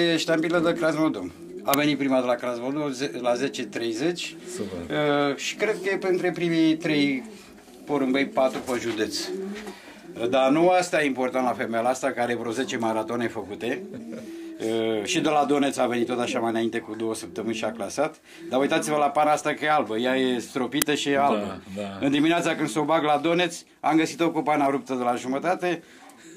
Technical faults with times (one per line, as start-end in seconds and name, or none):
1.74 uninitialised buffer
20.82 uninitialised buffer